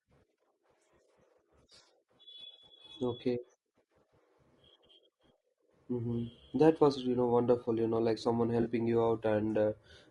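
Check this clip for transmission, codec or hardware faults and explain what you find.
Two faults are audible in this speech clip: a codec roughness throughout, and one brief dropout patch near the end.

From start to finish the speech sounds rough and grainy, with a hiss-like fill between the harmonics and a thin, synthetic-sounding top band. This is likely low-delay AAC compression, AAC-ELD, the codec used for video calls. Its short frames resolve pitch harmonics coarsely, and at a rate that points to around 32 kbps there aren't enough bits to keep the spaces between harmonics clean.

From 8.61 to 8.67 s there is a short smeared, noisy patch where the speech loses its definition. This is AAC frame loss with concealment. About 40 ms of coded audio, which fits two lost frames, never reached the decoder. It filled the gap by reusing the last good spectrum with scrambled phase, producing a brief blurred imitation of the preceding sound until real frames resumed.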